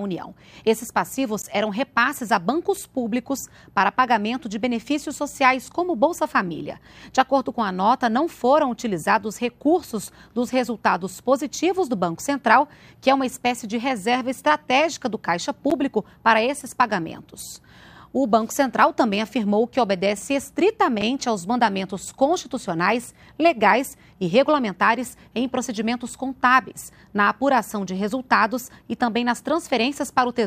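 The output buffer likely went unfilled three times, dropping blocks of digital silence into the sound at 1.42, 15.70 and 21.01 s. Each is heard as a tick or dip, lasting about 15, 10 and 6 ms; the last fits a 256-sample buffer.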